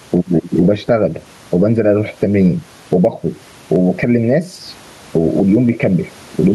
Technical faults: gain pumping

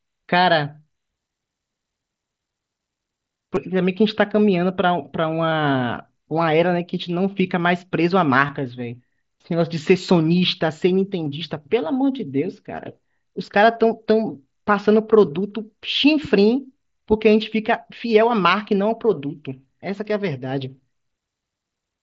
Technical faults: concealed Bluetooth headset packet loss

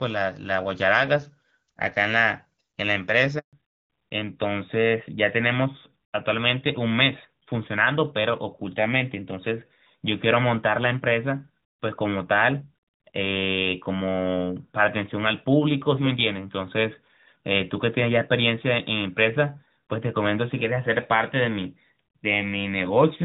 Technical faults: handover gap; fallback to narrowband

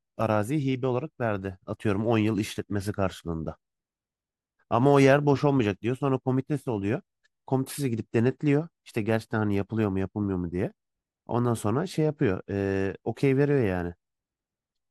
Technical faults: none

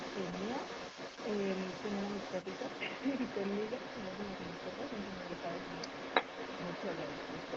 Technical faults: echo leak

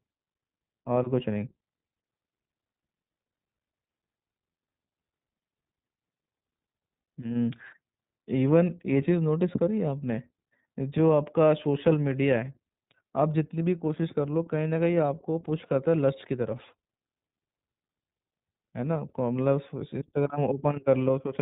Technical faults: iLBC codec

